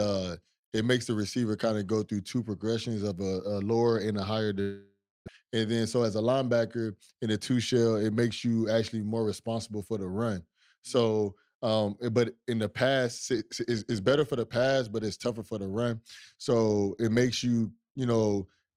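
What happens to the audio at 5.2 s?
A likely long network dropout, 4.61 to 5.30 s after "lower and a higher": 600 ms of speech never arrives, leaving a fading buzz and then 260 ms of silence.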